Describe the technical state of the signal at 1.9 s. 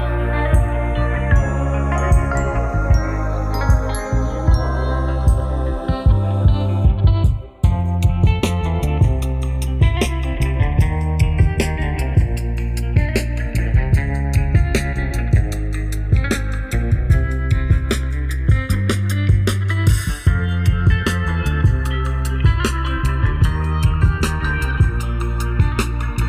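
At 1.9 s the channels are drifting apart, as they do throughout: a roughly 30 ppm clock mismatch slides their delay, so mono sums show slowly sweeping comb-notch stripes and flanging.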